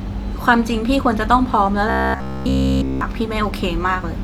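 From 1.90 to 3.01 s the speech collapses into robotic sound from repeated short buffers: a rigid, metallic buzz near 66.7 Hz that loosely tracks the speech. Essentially all of it is repeated material, likely a stalled stream looping a 15 ms chunk in place of missing audio.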